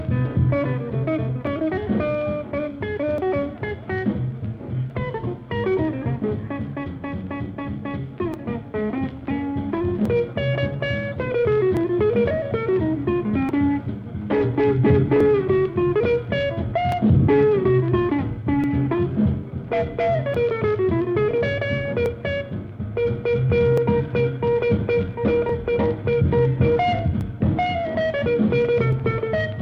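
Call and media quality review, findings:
Clock drift buffer slips, 1.47–28.93 s: regular clicks every 1.72 s, around fifteen. Likely clock mismatch of roughly 500 ppm, dropping or repeating blocks of around 50 samples.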